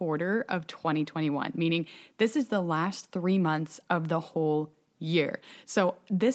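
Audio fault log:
No faults heard.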